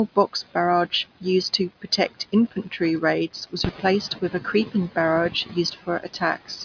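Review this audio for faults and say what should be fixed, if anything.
Nothing to fix, as no faults can be heard anywhere in the speech.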